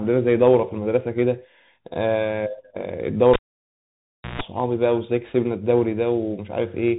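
A speech recording that has passed through a Bluetooth CVSD headset codec. On a spectrogram everything stops abruptly near 3.8 kHz. Each sample is coded as a single up-or-down step, which fits a 64 kbit/s stream, and the adaptive step can't keep up with loud, fast-changing sound, so sibilants turn scratchy and a fine granular hiss lies under the speech. That hiss shows as a speckled floor across the narrow band. From 3.33 to 4.41 s the cable is pulled and plugged in. A pop marks the start as a sharp spike on the waveform. About 1.02 s of near silence follows, a nearly flat trace. Within that gap comes roughly 140 ms of mains buzz while only the plug tip makes contact, visible as a 60 Hz line with stacked harmonics. A second pop spikes as the sound returns at 4.41 s.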